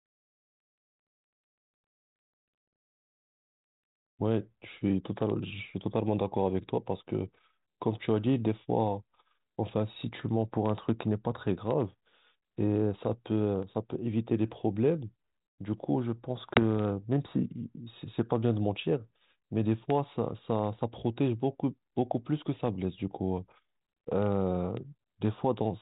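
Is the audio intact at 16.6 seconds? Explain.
No: packet loss on an ADPCM call, 16.54 to 16.59 s. About one packet, 20 ms, drops to silence, and the G.726 decoder's predictor loses sync, so speech returns slightly distorted before settling.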